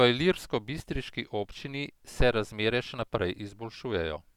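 No technical faults can be heard anywhere in the speech.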